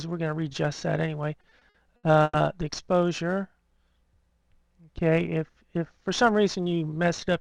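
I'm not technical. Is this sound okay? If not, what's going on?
No. Between 1.41 and 2.36 s the sound drags and hitches six times, with the longest pause about 110 ms. These are repeated stalls (stutter): the audio arrived late, so playback held the last sound while waiting, then carried on with nothing lost.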